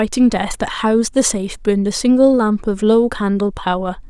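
No technical faults can be heard in the speech.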